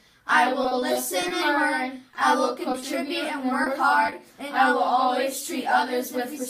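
The audio turns choppy from 0.63 to 1.32 s and again from 2.11 to 2.84 s, with short pieces missing. This is repeated packet loss (robotic sound): audio kept arriving late or not at all, and each hole was patched by extending the preceding sound before the next gap followed. Brief smears or wobbles then occur at 3.64 to 3.68 s and at 4.06 to 4.14 s. Each is a short concealed packet loss: a few hundredths of a second never reached the decoder, so the receiver filled it by continuing the last sound and then blended back into the real signal.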